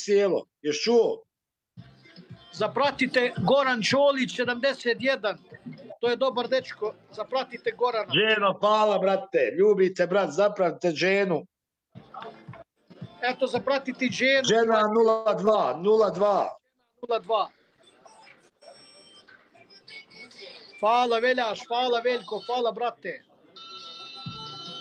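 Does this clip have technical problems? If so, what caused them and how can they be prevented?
Yes, there are four kinds of fault, all between about 15 and 23 seconds.

Call audio freeze, 15.09 to 15.28 s: packets were most likely held up in transit, so the jitter buffer ran dry. The receiver stretched the last sound into a fading buzz for about 160 ms. Then the audio resumed where it had stopped, so a pause was inserted and nothing was lost. Steadier routing and a slightly deeper adaptive jitter buffer would prevent this.

Short concealed packet loss, 15.46 to 15.49 s: roughly 20 ms of audio never reached the decoder. The receiver covered the hole by extending the preceding sound and blending back in, which gives a quick smear or wobble just after the freeze. Forward error correction or redundant packets would let the decoder rebuild such small losses.

Call bitrate drop, 15.96 to 21.7 s: the bandwidth estimate collapsed, so the encoder went from 64 kbps to 19 kbps for nearly six seconds. 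Coarser coding makes the sound rough and watery, and the treble is trimmed. More stable network capacity, or a less aggressive congestion controller, would keep the rate up.

Jitter buffer speed-up, 18.49 to 18.62 s and 20.77 to 22.63 s: after delayed packets arrived together, the buffer held too much audio. The receiver cut out pitch-period slices to shed the excess delay. The first stretch runs at 144% speed and drops about 70 ms. The second runs at 106% and drops about a tenth of a second. Both sound hurried but keep the same pitch. Smoother packet delivery, and a buffer that drains more gradually, would avoid the audible rush.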